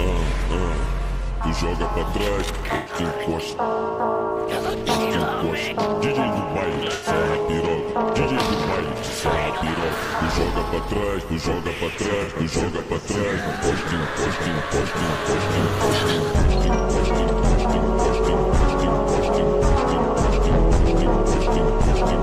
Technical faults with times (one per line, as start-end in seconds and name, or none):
2.75-2.94 AAC frame loss with concealment
6.94-7.08 AAC frame loss with concealment
12.23-12.28 AAC frame loss with concealment